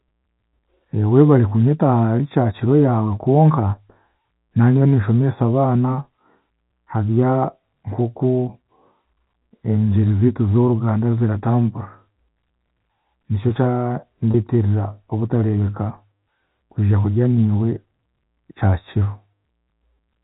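From start to finish the audio has a hollow, slightly phasey colour caused by channel delay (comb filtering). One channel runs late by a fraction of a millisecond, roughly 0.15 ms, and when the two are summed to mono the shared content cancels at regularly spaced frequencies. The first notch falls around 3 kHz, inside the telephone band that G.711 coding limits to about 4 kHz. It carves a fixed dip into the upper speech range and dulls consonant detail.

At 14.31 to 14.34 s a brief packet loss with pitch repetition occurs. About 30 ms of signal, consistent with a single lost packet, went missing. The receiver filled the gap by replaying the last pitch period, so the loss is heard as a short, slightly held, buzzy sustain. This gap is too short to fade into silence before the normal signal resumes.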